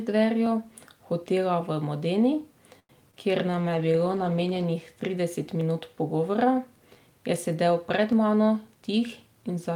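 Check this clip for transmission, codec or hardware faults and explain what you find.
Five kinds of fault are present in this speech clip. They are a repeating slip, a stall, a concealed loss, a bitrate drop and a speed-up near the end.

Clock drift buffer slips recur from 0.46 s to about 8.1 s, once every 2.52 s, about four times in all. Each one is a click in the speech. The steady spacing is what gives them away. The likely cause is two devices on separate clocks. One buffer slowly drifts full or empty until a small block of samples, around fifteen, is dropped or doubled. The rate fits a clock error of roughly 150 ppm.

A short stall from a late packet occurs between 2.79 s and 2.91 s. A packet did not arrive on time, and the jitter buffer emptied. The receiver held the last sound for about 97 ms until the packet came, then carried on from the same point. No audio is lost. The speech just freezes briefly, with a faint buzzy sustain. 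It also leaves the playout about 97 ms later.

A short concealed packet loss occurs from 3.11 s to 3.15 s. About 40 ms of audio never reached the decoder. The receiver filled roughly 19 ms of the gap by extending the preceding sound and then blended back into real audio. It is heard as a quick smear or wobble, and part of a sound can drop out. Skipping past the rest pulled the playout delay back by roughly 20 ms.

A call bitrate drop runs from 3.49 s to 4.72 s. The bandwidth estimate fell, so the encoder went from 32 kbps down to 14 kbps. It stayed at that lowest rate for 1.13 s. At 14 kbps the coding is coarse and the top frequencies are cut away. The speech turns muffled and watery. It then clears as the rate climbs back.

A jitter buffer speed-up covers 8.68 s to 9.71 s. Too much audio had built up in the buffer. To reduce the delay, the receiver cut many tiny pitch-period pieces, roughly 100 ms in total. 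The speech plays at about 110 percent speed. The pitch stays the same. The final phrase sounds hurried.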